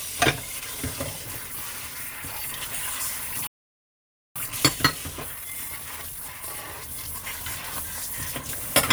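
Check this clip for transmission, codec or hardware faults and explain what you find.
Two related delivery faults affect the clip: a playback stall followed by time-compressed catch-up.

Playback stall, 3.47 to 4.36 s: the player most likely ran dry of buffered data, so output cut to silence for about 0.89 s before the sound resumed.

Time-compressed catch-up, 4.36 to 7.36 s: to clear the backlog, the player trimmed and cross-faded small slices, running the sound 1.1 times fast at unchanged pitch.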